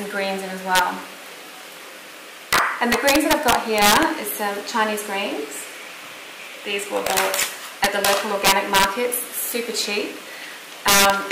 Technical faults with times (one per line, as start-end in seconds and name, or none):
0.75-0.79 integer overflow
2.53-4.03 integer overflow
7.07-7.43 integer overflow
7.84-8.84 integer overflow
10.88-11.31 integer overflow